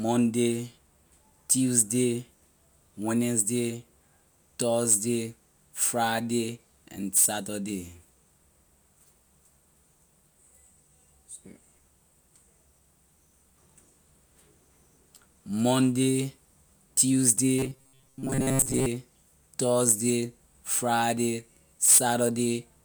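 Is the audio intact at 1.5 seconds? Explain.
Yes, at 1.5 seconds the speech plays through intact, with no dropout, click, distortion or other fault at that point.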